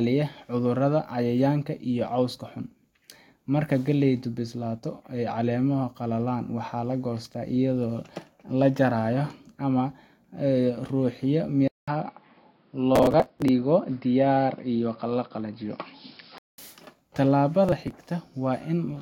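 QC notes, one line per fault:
11.68 to 16.58 s, input switched to a poorer device: The sound turns dull and narrow, with nothing above 5.3 kHz. A short silence of about 200 ms marks the switch. A new noise floor sits roughly 40 dB down. Loudness stays much the same. This is likely a change to a lesser microphone.
12.96 to 13.48 s and 17.65 to 17.95 s, processor overload crackle: Gritty bursts of crackle ride on the speech. Many short stretches of audio are skipped outright, leaving hard-edged gaps in quick succession. The spacing fits buffers of roughly 5 ms missing their deadlines. The crackle stops once the load passes.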